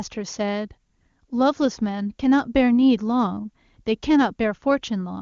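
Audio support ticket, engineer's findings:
Nothing to flag here: the speech comes across AMR wideband (HD Voice) at its top rate of 23.85 kbit/s, and nothing I hear needs chasing.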